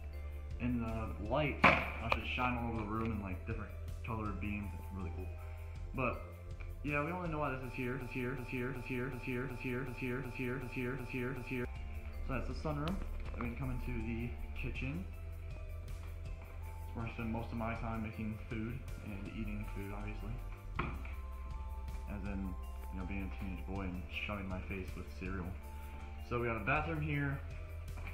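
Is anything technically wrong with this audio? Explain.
Yes. From 8.01 to 11.65 s, a 0.37 s fragment repeats exactly ten times, back to back: a broken-record loop, likely from a stalled player or stream resending its last fragment.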